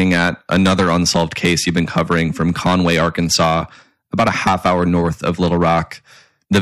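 Harsh fuzz sits on every loud syllable throughout the speech: hard clipping, with the signal driven about 12 dB too hot, so a small share of peaks are sliced flat.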